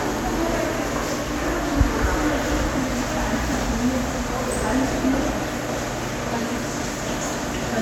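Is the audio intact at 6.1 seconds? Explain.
Yes, the audio is intact at 6.1 seconds, with no dropout, click, distortion or other fault at that moment.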